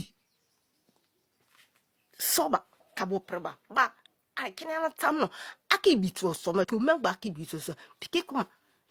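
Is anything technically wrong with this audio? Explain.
Yes. Damaged data in a compressed stream occurs twice, from 2.98 to 3.03 s and from 6.60 to 6.65 s, each lasting about 50 ms. At both points the encoded speech data is corrupted, so the decoder misreads those frames, loses its place in the stream and has to hunt for the next valid frame header before decoding resumes. Each spot breaks the speech with a short, harsh chirp or blip.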